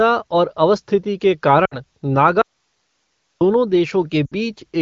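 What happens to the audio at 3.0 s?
At 3.0 s the speech is missing: an audio dropout to a faint residue runs from 2.42 s to 3.41 s, losing about 1 s of signal. The cutoff and return are abrupt, not a pause or fade. The gap holds only hiss about 50 dB below the speech level, which means the path after the break stayed live while the wanted signal stopped arriving, likely from an upstream interruption.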